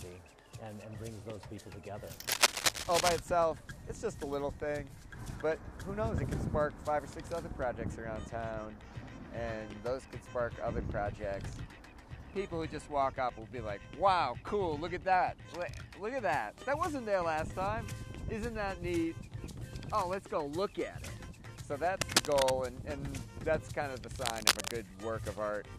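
A worn cable, connector or control was likely moved, its contact resistance jumping about, adding cable scratch noise: dense, ragged scratching from 2.28 to 3.19 s, 21.97 to 22.50 s and 24.25 to 24.71 s, the first and last louder than the sound, the middle about level with it.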